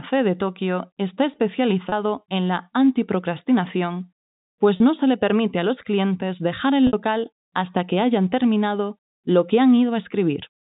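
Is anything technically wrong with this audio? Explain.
Yes. There is packet loss with pitch repetition three times. At 1.89 s, just before "en la antiprocrastinación pues", and at 4.77 s, just after it and before "no se le permite", about 30 ms drops out. At 6.87 s, after "los clientes dejar el", about 60 ms is lost. The receiver fills each gap by repeating the last pitch period. The short gaps sound like a brief, slightly buzzy held tone. The longer one holds and starts to fade before the speech resumes. The telephone coding itself sounds like ordinary G.711, with nothing heard above 4 kHz.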